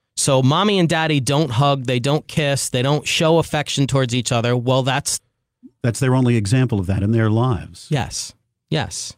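At about 5.19 s there's a skip ahead: around a second and a half of speech got dropped while later audio was already queued, so playback jumps straight forward with no gap filled in, and the two sides butt together almost seamlessly.

Right after, from 5.29 to 7.03 s, you get a jitter buffer speed-up. The buffer was sitting on more audio than it wanted, so it trimmed tiny pitch-period slices over and over, taking out roughly a fifth of a second. Speech runs about 12% faster at the same pitch and sounds a bit rushed.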